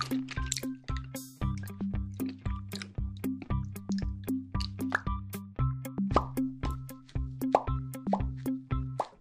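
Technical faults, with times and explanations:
No technical faults can be heard in this audio. Nothing in the sound calls for a time or an explanation.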